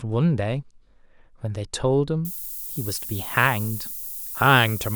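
Low bit depth with noise shaping runs from 2.25 s to the end of the speech. The signal is carried with too few bits, consistent with roughly a 7-bit word length. Each sample's rounding error is fed back so the quantisation noise is pushed upward in frequency. The result is a steady, thin hiss, strongest toward the top of the band and only about 10 dB below the speech.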